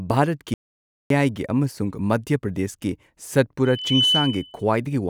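Audio dropout to silence at 0.54 to 1.10 s: the speech cuts to silence with no room tone for about 0.56 s, likely a lost input while recording continued. Loudspeaker feedback squeal at 3.65 to 4.64 s: a 3 kHz tone swells over a fraction of a second to sit roughly 5 dB above the speech, a microphone-to-speaker loop running away.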